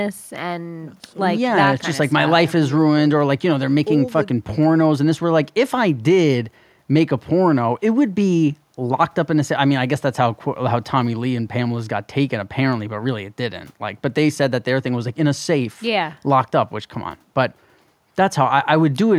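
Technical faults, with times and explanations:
No technical faults detected in this speech recording; playback is continuous and free of audible defects.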